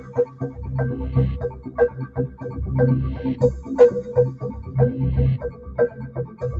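Music run through a speech noise suppressor, and you can hear it fighting the material the whole way. It treats sustained tones and ambience as noise, so attacks poke through while held parts get pulled down, giving a pumping, fluttery feel with level swings of around 15 dB. The top end stops near 8 kHz, which is just the Opus call path's bandwidth and isn't a fault.

The sound cut by the noise suppressor is clearest in four stretches: 0.00–0.58 s, 1.47–2.50 s, 4.32–4.76 s and 5.44–6.42 s. In each, the steadier or decaying parts sink by about 10 dB (about 9 dB in the third), with tails clipped short. The longer dips at 1.47 s and 5.44 s eat most of their stretch, and the third is only a brief duck.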